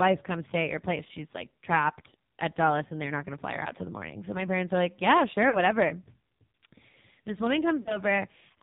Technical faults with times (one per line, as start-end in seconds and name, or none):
0.00-8.63 AMR narrowband mobile codec
5.50-5.60 lost AMR speech frames
7.80-7.99 lost AMR speech frames